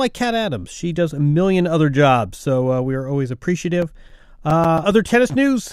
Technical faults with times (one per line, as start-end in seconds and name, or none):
3.82-5.18 CD scratch ticks